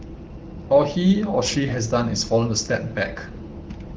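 No technical faults can be heard in this speech, which comes through the AMR wideband (HD Voice) codec as expected.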